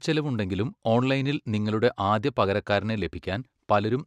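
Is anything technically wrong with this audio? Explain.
No, nothing technically wrong can be heard here.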